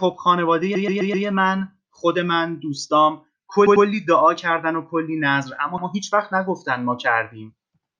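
Repeated frames at 0.75–1.26 s, 3.66–3.86 s and 5.78–5.87 s: a compressed block was replayed, a 128 ms piece four extra times, then 96 ms pieces twice and once. Each replay is heard as a stutter, and the speech runs about 0.8 s longer.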